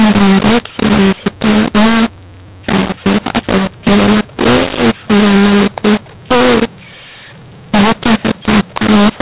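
Throughout, the speech is harsh and gritty, with hiss filling the pauses. This is a mu-law and A-law mix-up: A-law telephone audio was decoded as mu-law, scrambling the levels.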